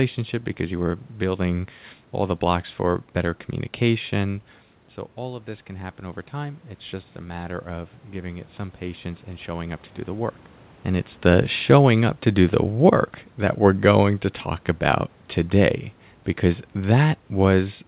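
Automatic gain rising runs from 5.16 to 10.35 s, just after the talker moves back from the microphone at around 4.5 s and the level falls by about 12 dB. The gain control sees the quieter input and slowly raises its gain by about 6 dB over those five seconds, so the speech and the room noise swell together. It recovers only part of the drop before the rise ends just ahead of "and it's the showing", and the talker moves again around 10.5 s.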